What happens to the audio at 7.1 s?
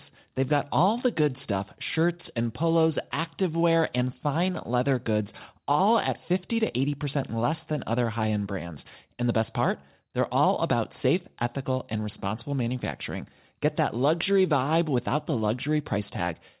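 Nothing goes wrong at 7.1 s: the speech continues intact, carried through the call path with the narrowband sound of G.711 mu-law, which leaves nothing above 4 kHz.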